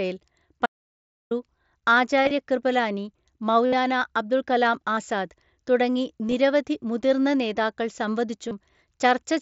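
A speech clip sent over a Bluetooth headset link, whose mSBC codec leaves speech band-limited to 8 kHz with light graininess. From 0.66 to 1.31 s there is an audio dropout to silence, about 0.65 s of silence with no room tone, likely from the input briefly disconnecting or muting. On a waveform it shows as a flat line with abrupt edges, and on a spectrogram as a fully black vertical band. Concealed Bluetooth headset packet loss occurs at 2.23–2.31 s (about 52 ms lost, scattered over 75 ms), 3.66–3.73 s (about 68 ms), 4.95–4.97 s (about 22 ms), 6.29–6.34 s (about 30 ms, scattered over 60 ms) and 8.49–8.51 s (about 22 ms). The receiver filled each gap by repeating recent waveform, so the longer runs sound buzzy and slightly warbled. A spectrogram shows short smeared patches of repeated harmonic striping, and the waveform shows near-identical repeating cycles at full level.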